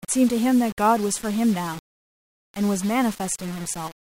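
From the first moment to the end, the speech carries a grainy, gritty edge that moves with the voice: low bit depth without dither. It's likely been rounded down to around 5 bits, leaving error only about 20 dB under the signal, so quiet tails sputter or drop out.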